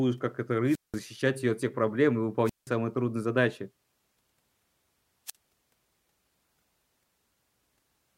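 At 0.66 s, after "как этот", there's a wireless microphone squelch dropout: the radio link fades, hiss rises, and the receiver mutes for 186 ms before "ее от всех проблем". It repeats at 2.44 s after "от всех проблем и" (176 ms), with a brief 50 ms hole at 5.26 s.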